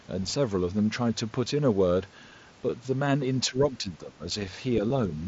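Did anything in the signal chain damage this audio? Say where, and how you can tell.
Yes, two kinds of damage, both in the live call path. The first is concealed Bluetooth headset packet loss on the radio link, at 1.45 s and again at 4.89 s. The first gap is tiny, about 7.5 ms, which fits a single lost mSBC frame. The second is about 15 ms. In both cases the receiver patched the hole by repeating a matching slice of the waveform just before it.

The second is in call processing, where the speech is suppressed in double talk from about 3.49 s to 4.25 s. The level sags in patches adding up to around half a second, with the deepest dips about 15 dB down. That pattern points to the echo canceller likely losing track during overlapping talk and pulling down the near side along with what it took for echo. The mSBC codec underneath adds just its usual light graininess.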